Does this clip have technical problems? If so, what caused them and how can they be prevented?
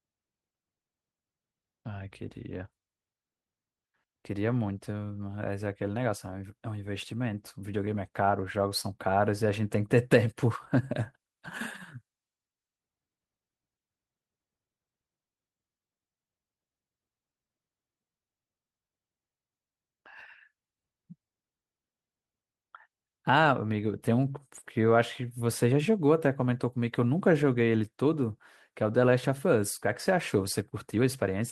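No, there are no technical faults in this clip.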